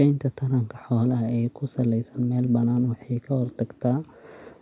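No audible technical faults anywhere in the speech; nothing to flag.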